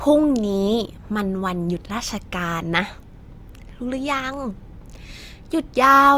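At 3.09 s and again at 4.34 s, single sharp clicks punctuate the speech, likely dropped samples: a fraction of a millisecond lost, so the waveform jumps without any audible gap, unlike a dropout.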